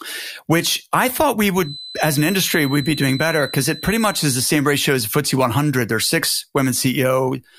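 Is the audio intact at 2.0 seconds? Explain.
No. At 2.0 s the speech carries a feedback whistle, a thin, steady tone at 4 kHz sitting about 15 dB below the signal and swelling and fading slowly in level. It starts at 1.56 s, just after "which I thought we", and lasts until 4.48 s, ending before "ratio as". The likely cause is a loudspeaker-to-microphone loop held right at its stability limit, so that one frequency keeps ringing without building up.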